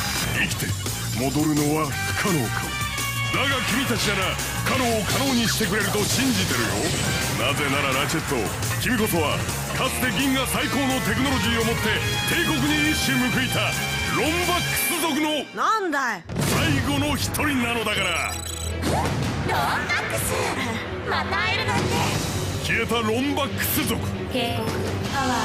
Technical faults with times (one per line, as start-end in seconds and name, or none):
14.66-16.11 GSM phone buzz